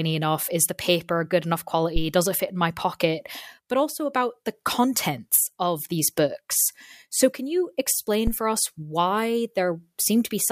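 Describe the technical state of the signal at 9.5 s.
At 9.5 s the speech signal is intact, with no audible fault at that moment.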